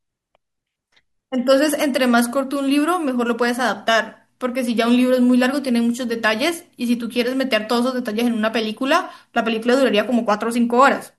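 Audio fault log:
No faults detected in this speech recording.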